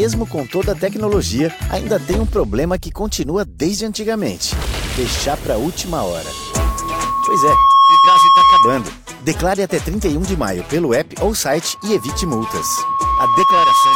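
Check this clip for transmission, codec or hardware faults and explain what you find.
One fault, loudspeaker feedback squeal, occurs twice: 6.24 to 8.92 s and 11.64 s to the end. A microphone-loudspeaker loop exceeds unity gain at 1.1 kHz, swelling over a second or two to roughly 10 dB above the sound, a rising horizontal spectrogram line.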